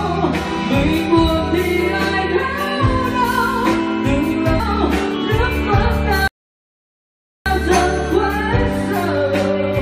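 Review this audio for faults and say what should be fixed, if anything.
Stream segment skipped at 4.59 s: the sound jumps abruptly forward with a small blip, as though a stretch of the programme is simply absent. The likely cause is one segment of the stream failing to load, so the player carried on from the next one. Retrying failed segment requests before moving on would prevent it.

Playback stall from 6.28 to 7.46 s: the output drops to silence in mid-flow for about 1.18 s, then resumes. This points to the player likely running out of buffered data, or its audio thread being blocked, until it recovered. A deeper playback buffer with a higher refill threshold would prevent it.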